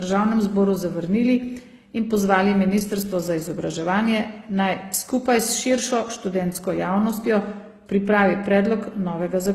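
Speech that was likely passed through two lossy codecs in turn, transcoding between lossy codecs, with a low-rate HE-AAC stage followed by Opus at a rate that sounds around 32 kbit/s. The second encoder spends its limited bits re-coding the first one's artefacts and adds its own artefacts on top, so both sets of damage sound together for the whole clip, and nothing remains above 15.8 kHz, the lowest cut-off in the chain.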